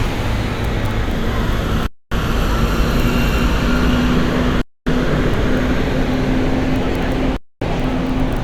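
Silence was inserted at the joins between 2.5-second chunks, a gap between chunks, leaving hard-edged 250 ms holes in the sound at 1.87, 4.62 and 7.37 s.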